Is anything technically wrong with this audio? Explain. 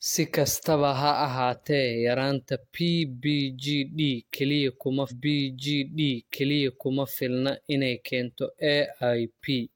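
Yes. From 5.07 to 7.07 s, after "kaliya kuma", a stream segment repeated: the player queued the same chunk twice, so about 2.0 s of speech replays, with a blip at the jump back. On a waveform or spectrogram, an identical two-second block appears twice, split by a sharp discontinuity, before "filna inay keento".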